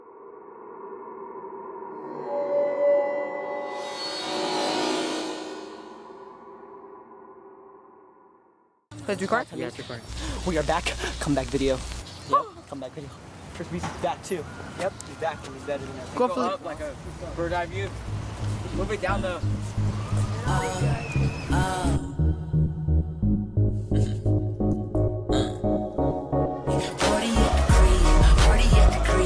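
No dropouts, clicks, distortion, level jumps or timing glitches turn up anywhere in the audio.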